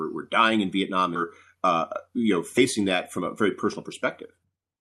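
A skip ahead at 1.15 to 1.17 s drops roughly a second of speech. Audio that was already queued got discarded, probably on the way or when the jitter buffer overflowed, and playback leaps straight to later material with no fill. The two sides of the cut are butted together almost directly, so the talker seems to jump forward, and the listening delay shortens by about the same second.

A jitter buffer speed-up runs from 1.55 to 3.89 s at 106% speed, trimming around 150 ms in total. The buffer was holding more audio than its target, so the receiver repeatedly cut out tiny slices one or a few pitch periods long. Pitch stays put while the delivery sounds slightly hurried. A second, much stronger speed-up starts at 4.35 s and runs to the end at 158% speed, shedding roughly 300 ms, and that closing stretch sounds clearly rushed and crowded. Through all of this the Opus call coding adds its usual coding noise, with the top end limited at 12 kHz.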